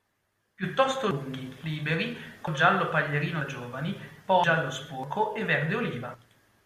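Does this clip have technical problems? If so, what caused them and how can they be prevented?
Yes. The speech jumps ahead at 1.11, 2.48, 3.41, 4.44 and 5.04 s, skipping about 0.1 s at the first, third and fifth and about 0.3 s at the others. This is likely a dropped buffer (overrun): unread samples were overwritten. Larger buffers and a higher-priority capture thread prevent it.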